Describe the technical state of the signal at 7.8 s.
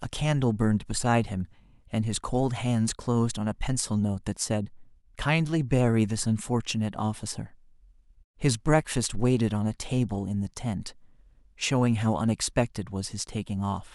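At 7.8 s the speech signal is intact, with no dropout, distortion, glitch or other technical fault at that point.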